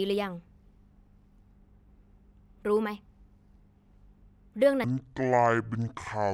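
At 4.84 s the speech drops abruptly into a section at the wrong speed that runs to the end at 6.34 s. It plays at about 0.55 times the original rate, so the voice turns slow and deep, roughly ten semitones lower, with pitch and pace falling together. The likely cause is that section being played against the wrong clock. On a spectrogram the harmonics and formants step down and spread out in time. On the waveform the cycles visibly lengthen.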